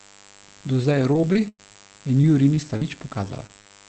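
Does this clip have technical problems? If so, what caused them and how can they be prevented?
Yes. Five kinds of fault can be heard.

Mains buzz runs through the whole clip. It is a raspy 50 Hz buzz sitting roughly 25 dB below the speech. Sharp switching spikes from a dimmer, rectifier or poorly shielded cable enter the signal twice per mains cycle, so the buzz carries harmonics of 50 Hz well up into the kilohertz range. On a spectrogram it shows as a ladder of evenly spaced horizontal lines spanning the full length. Prevention: use shielded, properly grounded cabling and keep the microphone chain away from dimmers and switching power supplies.

Repeated packet loss, heard as robotic sound, covers roughly 0.91 to 2.87 s. Ten separate gaps occur there, the longest 98 ms, with about 0.3 s of audio missing in total. The receiver bridged each hole by extending the last sound, so roughly 14% of that stretch is synthetic fill. 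The result is choppy, with pieces of speech gone. A spectrogram shows repeated smeared, frozen patches and harmonics that flatten where the fill takes over. Prevention: fix the network path by reducing congestion, preferring wired links and giving the call traffic priority.

Lost packets rebuilt from error correction occur at 3.23 to 3.25 s and 3.29 to 3.31 s, each 20 ms long. The following packet carried a low-bitrate copy of the lost one (Opus in-band forward error correction), so no gap is heard. The two moments sound briefly rougher and noisier instead. On a spectrogram they appear as slightly grainier 20 ms slices with blurred detail. Prevention: reduce packet loss on the link, and keep in-band error correction enabled as a safety net.

Short concealed packet loss occurs at 3.47 to 3.51 s and 3.67 to 3.72 s, each missing about 20 ms. The decoder continued the preceding sound into the hole and then blended back into the real audio. 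Each one sounds like a brief smear or wobble. On a waveform there is a short stretch that continues the sound before it. Prevention: use a larger jitter buffer and a more stable network connection.

A burst of packet loss occurs at 3.61 to 3.67 s. About 40 ms of audio never arrived. The receiver extended the last sound for roughly 48 ms and faded it down as the gap went on, and the speech then resumes further along with the part in between missing. A waveform shows a decaying, repetitive stretch. Prevention: improve link stability, and enable redundancy such as forward error correction so short bursts can be recovered.

The call path itself, which fits Opus at about 24 kbps with an 8 kHz bandwidth, limits the top end of the audio but is not a fault here.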